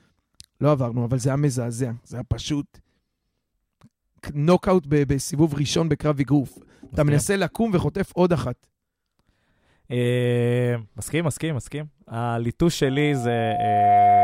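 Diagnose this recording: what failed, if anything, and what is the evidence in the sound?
The analogue loop between microphone and loudspeaker closed: from 12.83 s to the end of the clip at 14.24 s, loudspeaker feedback squeal sets in as a pure 712 Hz tone that swells over about a second until it sits roughly 5 dB above the speech, the signature of loop gain exceeding unity at that frequency.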